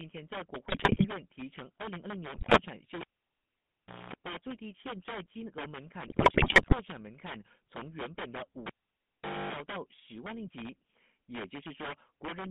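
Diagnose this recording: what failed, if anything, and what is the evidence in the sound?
Integer overflow in sample-format conversion or a gain stage: loud peaks, driven about 19 dB past full scale, wrap to the opposite sign, giving violent cracks far harsher than ordinary clipping's flattened buzz.

GSM full-rate codec: audio is confined to 150 Hz to 3.6 kHz throughout, with a buzzy, gravelly roughness that fits 13 kbit/s GSM, unlike the smoother muffling of plain band-limiting.

GSM bit errors on the radio link: squawks, pops and gargling at 0.68–1.08 s, 2.34–2.62 s and 6.08–6.75 s, where corrupted parameters distort frames rather than dropping them to silence.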